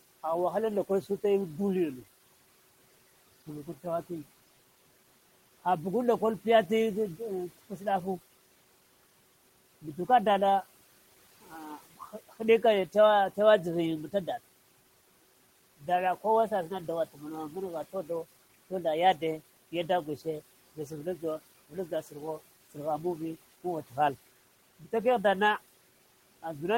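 A speech recording with speech cut by the noise suppressor in two places. From 20.76 to 21.23 s, parts of the speech dip by up to about 10 dB. From 21.7 to 22.14 s, they dip by up to about 12 dB. Each time, only brief moments are affected, roughly a tenth of a second or a little more. The suppressor mistook quiet speech for the room noise, which sits about 21 dB below the speech. Those sounds come out faint and swallowed.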